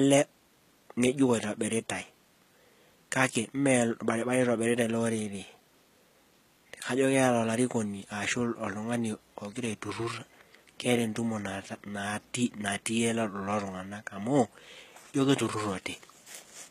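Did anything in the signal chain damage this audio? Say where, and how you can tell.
Yes, at the codec stage. Throughout the speech there is nothing above 14.9 kHz, and the top octave has the bright but synthetic quality of spectral band replication. Sibilants come out gritty and metallic, and the upper harmonics fail to line up with the lower ones across the crossover. The likely cause is HE-AAC compression, with treble regenerated from copied lower bands under a coarse envelope. The plainly audible damage points to a very low bitrate, around 20 kbps.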